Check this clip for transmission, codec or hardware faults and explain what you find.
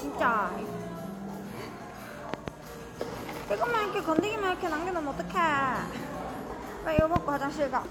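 Three loud pops stand out, sharp thumps roughly 20 dB above the surrounding sound, which carries on underneath each one. The first, from 2.34 to 2.50 s, is a quick double pop. The second, at 4.19 to 4.21 s, is a single pop. The third, from 6.99 to 7.18 s, is again a double. A likely cause is a sudden voltage step or spike, such as a switch, plug contact, static discharge or driver glitch, which the following circuitry shapes into a pulse.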